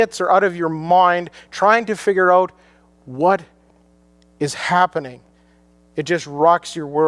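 Nothing technical stands out in this bit of speech; there's no fault here to point to.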